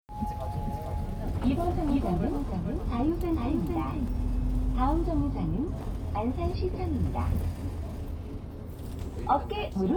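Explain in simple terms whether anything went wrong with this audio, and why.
From 0.54 to 4.08 s there's a doubled audio track: a second, quieter copy follows about half a second behind, likely from a slower second capture path.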